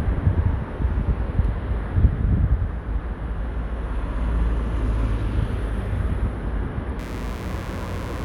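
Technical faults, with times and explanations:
6.99–8.25 s: mains buzz, a raspy 60 Hz buzz rising well into the kilohertz range, roughly 20 dB below the sound, from switching spikes leaking in twice per cycle.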